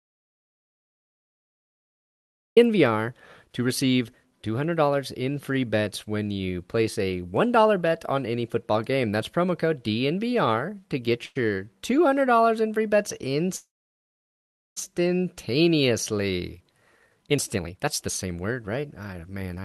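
The speech is already in an audio dropout to silence when it begins, and nothing is heard until 2.57 s. The gap is silent, with no room tone or hiss, which points to the input being lost while the encoder kept writing empty samples. The likely cause is a disconnected device or broken link ahead of the encoder. Whatever was said in those first two and a half seconds is gone.

At 11.25 s, just after "to get", there is a short stall from a late packet lasting until 11.37 s. A packet failed to arrive on time, the jitter buffer emptied, and the receiver stretched the last stretch of sound by about 99 ms until the packet turned up. Nothing is lost. The syllable is simply held too long, with a faint buzz or dip, and everything after it lands about 0.1 s later.

From 13.56 s to 14.78 s, right after "in free bets", comes a call audio freeze. The last sound is carried on briefly as a fading buzz or hiss, then drops to silence for about 1.1 s before the speech resumes from exactly where it stopped. 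The likely cause is packets held up in transit, so the jitter buffer ran dry and the receiver filled 1.2 s of waiting time. The added gap pushes the rest of the speech later by that amount, while nothing is missing.

From 16.86 s to 19.64 s a jitter buffer speed-up follows. The buffer was holding far more than its target. The receiver worked that backlog down by repeatedly cutting out pitch-period-sized slices, about a second in total. Speech runs at roughly 131% speed at unchanged pitch and sounds noticeably hurried, through the Opus call path whose top end stops near 12 kHz.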